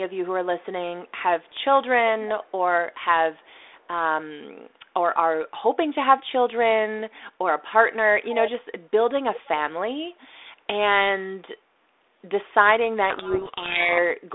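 From 1.44 to 1.64 s, and again from 2.44 to 2.51 s, a very faint delayed copy of the speech trails the original by about 0.3 s (305 and 307 ms). Both scraps sit far below the live speech. The likely cause is echo leak: the far end was on a loudspeaker, and its echo canceller let part of what its microphone picked up slip back into the call.

From 13.1 to 13.99 s the speech is buried under harsh, grinding distortion. This is a codec payload misread. The G.726 code words were unpacked in the wrong bit order, so the decoder took well-formed frames and applied each bit to the wrong place in the adaptive difference coding. The rebuilt waveform drifts badly off the real signal until the stream is read correctly again.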